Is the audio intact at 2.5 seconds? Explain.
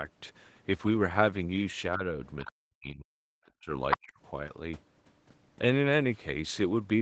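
No. From 2.40 to 2.52 s the echo canceller likely failed to fully remove the far end's loudspeaker playback from the microphone. The result is the other side's voice leaking through: a brief scrap of a second voice sitting roughly 15 dB below the main speech. It lasts only about a tenth of a second, but it is a different voice laid over the talker.

Overlapping that, from 2.44 to 3.11 s, the speech is suppressed in double talk. With both sides active at once, the canceller likely could not tell the talker from the echo and pulled both down. Over roughly 0.7 s the talker's speech dips, falling by as much as around 40 dB at its deepest, so parts of it nearly vanish instead of carrying through steadily.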